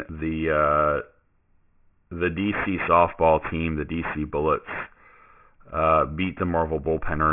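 From start to finish the speech has a gritty, metallic edge. Sibilants come out as harsh buzzy hiss at the wrong pitch, and the spectrum runs right up to a hard ceiling at 3 kHz with folded energy roughly 15 dB below the speech itself. This is aliasing. The sample rate was cut, apparently to around 6 kHz, without first filtering out everything above 3 kHz, so the higher content mirrored back down into the band as unrelated tones.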